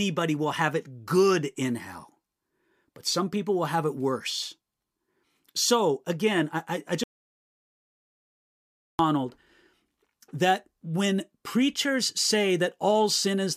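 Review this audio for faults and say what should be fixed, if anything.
An audio dropout to silence runs from 7.04 to 8.99 s. The speech cuts off mid-flow and returns about 2 s later. No room tone remains in the gap. The input was likely lost while recording continued. Secure all connections and monitor the input during capture.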